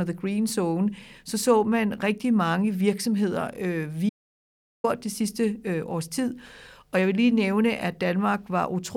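At 4.09 s, right after "rigtig mange virksomheder øh", the speech cuts off abruptly into silence, with no room tone or background hiss. It resumes at 4.84 s on "det sidste øh års", so about 0.75 s of the talker's speech is simply missing. This is an audio dropout to silence. The input signal was most likely lost for that stretch, through a disconnected device, a broken link or a momentary mute, while the recorder kept writing silence.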